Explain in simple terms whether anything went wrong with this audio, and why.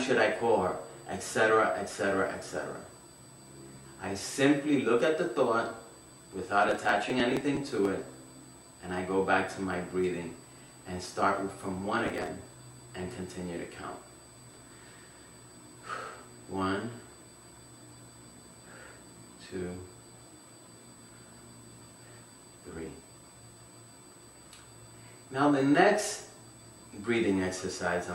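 Two things went wrong. The first is USB whine, a thin, steady high-pitched tone at 8 kHz that sits under the sound for the whole clip. A USB connection moves data in tiny bursts 8,000 times a second, and some of that electrical activity leaks into the audio through the power or ground wiring. Because the bursts keep a fixed rhythm, the leak is heard as one constant pitch rather than as noise.

The second is processor overload crackle, heard from 6.69 to 7.88 s and again, more briefly, from 12.07 to 12.27 s. During those moments the computer was too busy to prepare each small chunk of audio in time, so chunk after chunk was skipped. Each skip leaves a tiny hole with abrupt edges, and the quick string of holes sounds like gritty crackling. The sound sits on top of the audio and stops once the load eases. The rapid rate of the crackle fits very short audio chunks, each about a millisecond and a half long.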